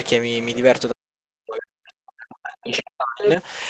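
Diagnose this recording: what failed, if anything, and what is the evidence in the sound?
Short scraps of a second voice appear at 0.04–0.08 s, 0.53–0.59 s, 2.72–2.79 s and 3.22–3.30 s. They rise from about 30 dB below the talker to roughly level with it. This is other side's voice leaking through, at the call-processing stage: the echo canceller likely left part of the loudspeaker signal in the microphone feed.

Between 0.91 and 3.38 s the talker's speech repeatedly sinks and cuts out, falling by up to about 40 dB and missing for roughly two seconds in total. This is speech suppressed in double talk, likely caused by the echo suppressor mistaking overlapping speech for echo and attenuating both.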